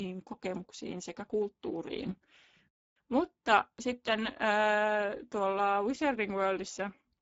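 Speex codec damage runs through the whole of this speech recording. The voice sounds plainly hoarse and noisy because the CELP coder has too few bits to rebuild the excitation, which fits a low bitrate near 10 kbps. Nothing is heard above about 7.7 kHz.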